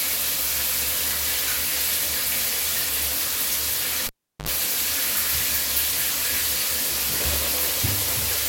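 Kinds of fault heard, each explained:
Cable pulled and plugged in: a live lead is yanked and reinserted around 4.07 to 4.49 s, giving a pop, 370 ms of near silence, 68 ms of 50 Hz buzz, then another pop.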